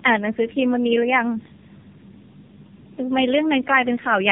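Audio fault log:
Throughout: tandem speech coding. The speech passes through three speech codecs in a row, a 64 kbit/s CVSD stage, then AMR-NB at 6.7 kbit/s and AMR-NB again at 7.95 kbit/s, with G.711 links between them. Each coder re-encodes the previous one's damage, so the speech comes out rough, muffled and warbly. On a spectrogram, energy stops near 3.5 kHz and the harmonics look smeared and unsteady. The waveform looks grainy.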